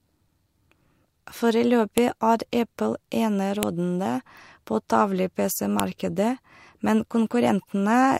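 A speech recording with three sharp, loud clicks, at 1.98 s, 3.63 s and 5.8 s, each a brief snap that stands out regardless of what the speech is doing at that instant. This is a file header played as audio: the clip appears to be separate WAV pieces joined end to end without stripping their headers, so the few dozen header bytes at the start of each piece are decoded as sample values and land as an abrupt transient at every join.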